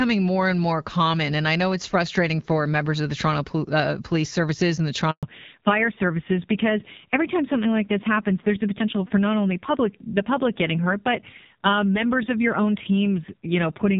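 At 5.11 s, just after "and the", there is a handover gap. The call switched networks and no speech frames arrived. The sound dies away and stays silent for 120 ms, until 5.23 s. Whatever was said in that span is lost.

From 5.23 s to the end comes a fallback to narrowband. Before this, the wideband sound fits AMR-WB at 12.65 kbit/s, with light codec damage. Now nothing above 4 kHz passes. The speech turns duller and rougher, which fits AMR narrowband at 5.9 kbit/s.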